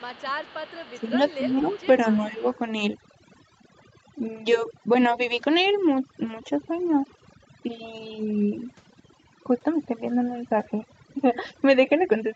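Throughout the clip, overdone noise removal leaves the background near-silent but sprinkled with twinkling specks. Bands near the suppressor's noise estimate are gated away along with quiet speech detail. The damage is constant spectral thinning, not dips tied to moments.

From 0.0 to 0.38 s, 0.99 to 1.15 s, 1.37 to 1.76 s and 2.13 to 2.44 s, the speech ducks by about 10, 10, 15 and 5 dB. This speech suppressed in double talk likely comes from an echo canceller turning the talker down while the far side spoke. Unlike noise removal, these are brief, level-wide drops.

Overlapping these, at 0.14 to 0.24 s, 0.41 to 1.11 s, 1.3 to 1.37 s and 1.59 to 1.86 s, a faint copy of the voice played on the loudspeaker trails 230 ms behind at about 25 to 30 dB down. This echo leak is likely loudspeaker pickup the canceller missed. It adds a delayed ghost, where suppression only removes sound.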